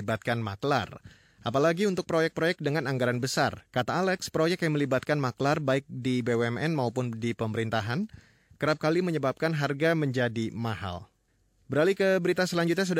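No technical faults occur anywhere in the recording, so there is nothing to describe in time order.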